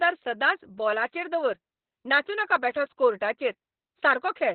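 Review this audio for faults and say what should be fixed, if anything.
Opus voice compression, running throughout the clip, has been squeezed to a very low rate, which fits roughly 8 kbps in its SILK linear-prediction mode. At that rate the coder drops to narrowband and models the excitation only coarsely. The result is speech with nothing above about 4.2 kHz, so it sounds muffled and telephone-like, with a hoarse, slightly robotic edge where the coarse excitation replaces natural voicing. To prevent it, give the encoder enough bitrate to stay wideband or better.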